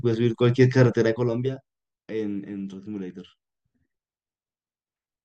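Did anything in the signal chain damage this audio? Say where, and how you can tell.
Yes. From 0.90 to 1.71 s a fine ticking, like a zip being drawn, rides on the speech as its level drops by roughly 15 dB. That is zipper noise: unsmoothed 1 dB gain steps, about twenty a second, each clicking, pointing to a gain update once per buffer.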